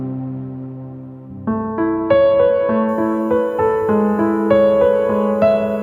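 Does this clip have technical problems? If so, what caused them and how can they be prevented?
Yes. USB whine enters at 2.88 s and continues to the end: a faint fixed-pitch 1 kHz frame-rate tone, strongest at its 15 kHz harmonic, leaking through power or ground. Prevent it with a powered hub, USB isolator or ground-loop isolator.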